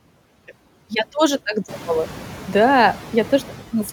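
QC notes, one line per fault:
Throughout: noise suppressor artifacts. Background noise drops about 8 dB between words and returns beneath them, as the suppressor cuts bands it judges steady noise, frame by frame.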